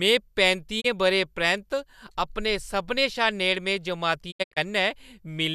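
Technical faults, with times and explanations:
0.80 to 0.86 s and 4.30 to 4.58 s, digital broadcast dropout: the receiver muted on failed frames, first one 24 ms hole, then about 168 ms lost in short holes across 240 ms (longest 72 ms). Clean 20 ms fades to silence, not concealment repeats or clicks.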